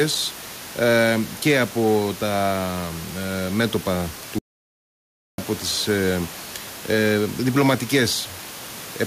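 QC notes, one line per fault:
4.39–5.38 s, audio dropout to silence: just after "ε μέτωπα" the speech breaks off mid-flow, and about 1.0 s is missing before the sound resumes at "τις ε". The gap is silent. Even the room noise, heard about 19 dB below the speech elsewhere, vanishes, which sets this apart from a natural pause or a noise gate's dip. The likely cause is a brief loss of the input signal while recording continued writing silence.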